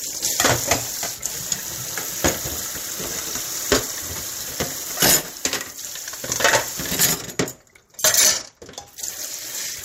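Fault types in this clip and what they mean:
Nothing stood out on listening to this recording of sounds.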